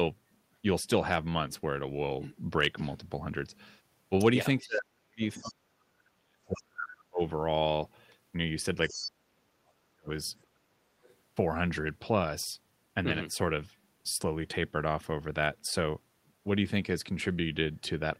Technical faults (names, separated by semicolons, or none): speech suppressed in double talk; other side's voice leaking through